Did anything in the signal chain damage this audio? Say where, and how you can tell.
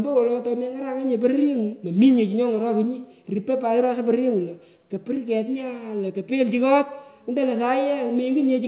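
No, no stage in the chain damaged this speech; the only trace of the call path is its band limit, with nothing above 4 kHz, which fits a G.711 A-law codec doing its ordinary job.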